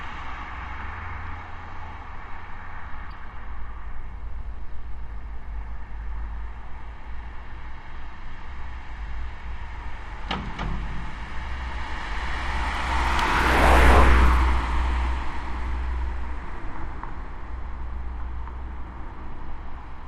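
At 3.11 s there's a corrupt frame decoded: a couple of damaged compressed frames got played anyway, giving a quick chirpy blip peaking around -30 dBFS.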